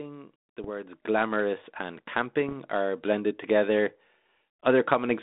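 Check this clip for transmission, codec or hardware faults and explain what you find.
Two kinds of fault are present in this speech: bit errors on the ADPCM link and stepwise rises in microphone volume. Both sit on top of a G.726 telephone path at 32 kbit/s, whose band stops near 3.7 kHz and leaves a faint, level-following roughness.

Bit errors on an ADPCM link, 0.63 to 0.71 s and 2.48 to 2.53 s: a few bits per thousand were flipped. Each wrong bit throws off the decoder's step size and prediction, so the damage persists briefly. The result is a pop followed by a short rough, uneven burst.

Microphone volume stepped up at 1.02 s (about 8 dB), then at 2.04 s and 3.06 s (about 2 dB each): the call software raised the input gain in single jumps. The voice and background get louder together, abruptly.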